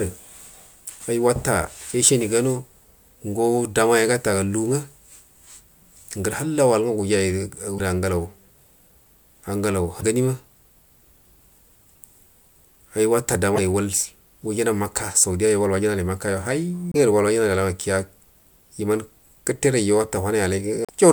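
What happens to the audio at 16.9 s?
The likely cause is a broken MP3 bit reservoir: frames were dropped from the stream, and the next frame reached back for data it had stored in earlier frames, only to find bytes from a different frame. The decoder skips ahead in the speech, and from 16.92 to 16.96 s the first frame or two after the gap decode as a short, garbled disturbance. That span, about 40 ms, fits MP3 frames of roughly 26 ms each.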